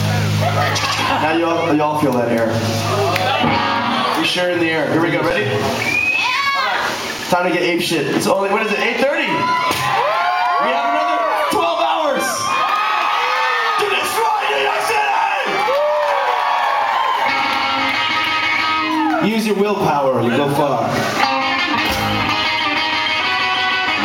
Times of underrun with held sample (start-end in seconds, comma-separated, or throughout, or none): 5.30, 7.19